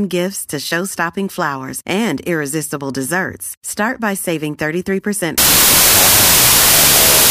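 Speech runs cleanly until 5.38 s, when it collapses into loud, harsh noise with the voice buried underneath, slowed to half speed and an octave lower, lasting to the end at 7.30 s. This is a wrong sample width fault. The sound fits 32-bit integer samples being read as 16-bit. Every original sample splits into two values. One half keeps the signal's top bits and the other half is the low bytes, which come out as noise. The doubled sample count halves the speed.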